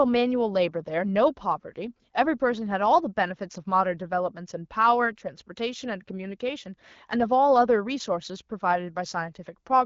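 No faults detected; the speech runs over an AMR wideband (HD Voice) link at 12.65 kbit/s, with its upper band capped at 7 kHz as that codec does.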